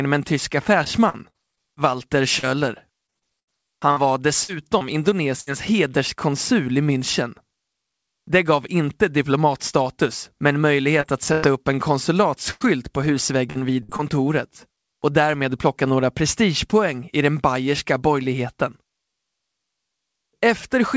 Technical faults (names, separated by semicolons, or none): repeated packet loss (robotic sound)